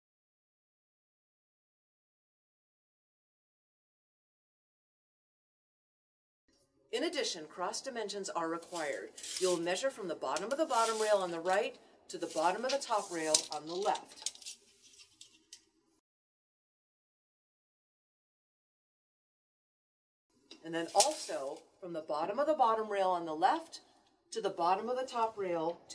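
No technical faults are audible.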